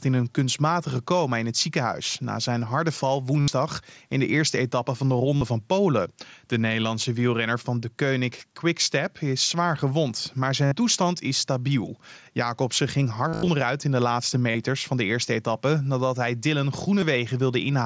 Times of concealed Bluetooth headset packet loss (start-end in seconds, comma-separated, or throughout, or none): 3.40-3.48, 5.36-5.44, 6.81, 8.84-8.86, 10.65-10.72, 13.28-13.48, 14.51-14.55, 17.01